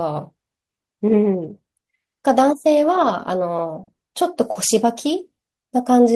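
Short concealed packet loss hits this speech clip three times, at 3.83 to 3.90 s, 3.95 to 4.02 s and 4.51 to 4.58 s. Each time about 40 ms of audio arrived too late, so the receiver extended the preceding sound to bridge the gap, leaving brief smeared or wobbly patches.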